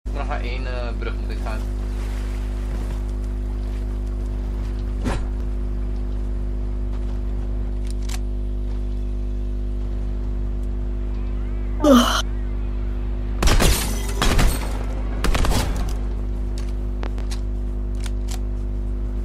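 Right near the end, from about 17.03 to 17.22 s, there's a loud pop, really a pair of them in quick succession, sitting roughly 10 dB above the surrounding sound. The likely culprit is a sudden voltage step or spike getting into the chain, say from a connector, a switch or a bit of static, which the downstream circuitry then shapes into a sharp thump. The sound keeps running underneath, so it's a clean double knock layered on top.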